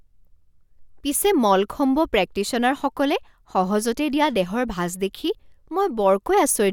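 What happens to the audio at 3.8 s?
Nothing goes wrong at 3.8 s; the speech carries on intact through that moment, with no dropout, click or distortion.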